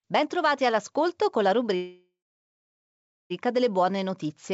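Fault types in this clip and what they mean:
Call audio freeze: At 1.76 s the speech stops advancing and the last sound is stretched into a decaying fill that sinks to silence for about 1.2 s before the talk resumes at 3.33 s. The roughly 1.5 s gap is likely a jitter buffer that ran dry while packets were held up in transit. Nothing is lost; the speech continues from where it stopped, about 1.5 s late, still band-limited to about 7 kHz.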